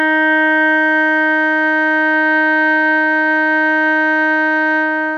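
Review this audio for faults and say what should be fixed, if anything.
Nothing needs to be fixed, since no faults can be heard anywhere in the music.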